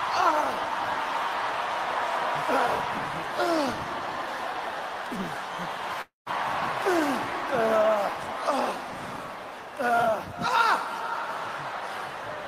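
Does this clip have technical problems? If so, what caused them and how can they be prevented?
Yes. From 6.01 to 6.29 s there's a long network dropout, likely a run of lost packets. The receiver stretches the last sound into a fading buzz for about a quarter second, then goes silent for about 150 ms, and the audio resumes with roughly 240 ms of material gone. A bigger jitter buffer plus forward error correction or packet redundancy on the link would help prevent it.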